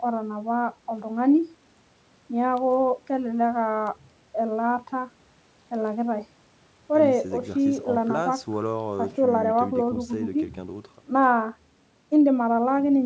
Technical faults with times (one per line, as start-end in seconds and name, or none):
none